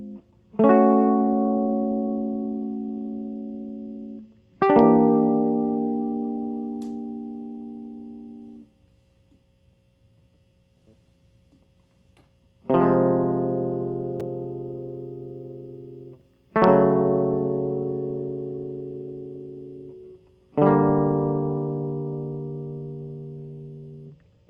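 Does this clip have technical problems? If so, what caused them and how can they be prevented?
No, this music clip has no technical problems, so there is nothing to prevent.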